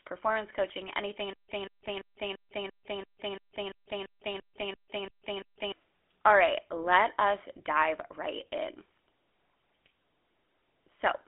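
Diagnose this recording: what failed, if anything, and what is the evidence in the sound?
The speech went through a GSM full-rate codec, which fits a 13 kbit/s mobile-call path. This low-rate vocal-tract model, driven by sparse pulses, gives the whole clip a buzzy, gravelly roughness. Nothing sounds above about 3.8 kHz, and the band is narrow like a phone line.

A stalled stream or player buffer is the likely cause of the stutter with silent gaps from 1.33 to 5.72 s. A 0.18 s fragment replays every 0.34 s, each followed by 0.16 s of dead digital silence. The audio that should have filled that span is lost.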